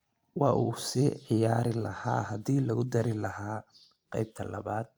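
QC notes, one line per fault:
No faults heard in this speech recording.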